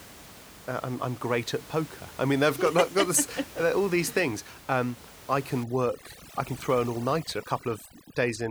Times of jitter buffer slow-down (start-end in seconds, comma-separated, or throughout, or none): none